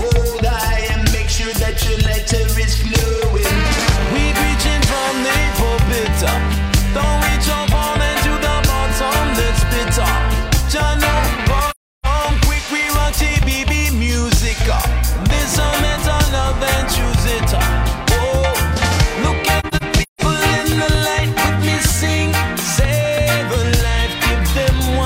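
The audio has two soft-edged dropouts from AAC frame loss with muting, at 11.70 to 12.06 s and as scattered gaps across 19.60 to 20.21 s, the longest run around 150 ms. Lost frames were decoded as silence, and the overlapping windows fade out and back in. Spectrograms show blank full-band columns with tapered edges, and the waveform pinches smoothly to zero.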